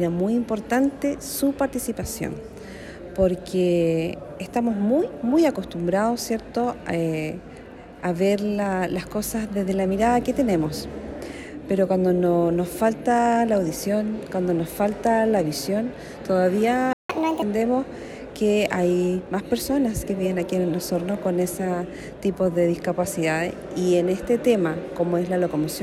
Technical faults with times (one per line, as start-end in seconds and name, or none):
16.93-17.10 playback stall
17.10-17.42 catch-up at higher speed